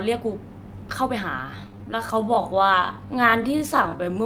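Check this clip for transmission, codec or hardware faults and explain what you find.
One fault is present: a time-stretched section running from 1.26 s through to the end of the clip. At that point the pace of the speech drops abruptly to about 0.635 times its original speed while the pitch stays where it was. The likely cause is software fitting the audio to a longer duration by repeating short segments rather than resampling. The slowed portion drags, with drawn-out syllables.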